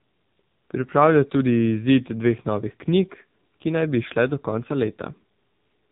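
AMR narrowband mobile codec throughout the speech: nothing above 3.8 kHz survives, and heavy pulse-driven vocal-tract modelling sounds buzzy and synthetic, consistent with about 6.7 kbps.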